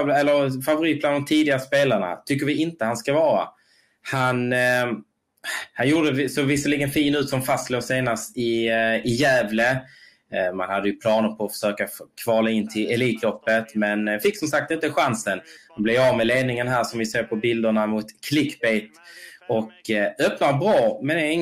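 Nothing is technically wrong with this audio, so there are no fault times or causes to give.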